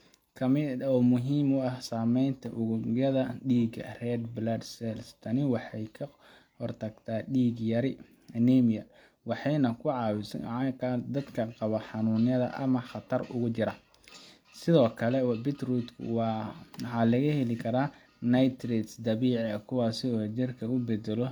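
No technical faults occur anywhere in the speech, so there are none to describe in time order.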